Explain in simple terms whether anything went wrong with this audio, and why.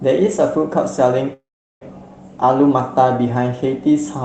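A call audio freeze interrupts the speech from 1.33 to 1.83 s. The last sound trails on briefly as a fading buzz, then there is roughly 0.4 s of silence. When the speech returns it picks up exactly where it stopped, so nothing is lost; everything after simply runs about half a second late. That is what separates it from a dropout, which cuts sound out. The likely cause is network packets held up in transit during the call.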